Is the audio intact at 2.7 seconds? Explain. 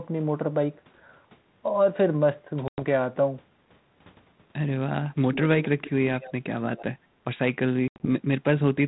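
No. From 2.68 to 2.83 s there is packet loss on an ADPCM call. About 100 ms of speech, on the order of ten packets, is gone and replaced by a hard-edged silent gap. Because ADPCM codes each sample as a difference from an adaptive prediction, the decoder's predictor and step size drift out of step with the sender's during the gap. The speech that follows comes back mismatched and takes some tens of milliseconds to settle.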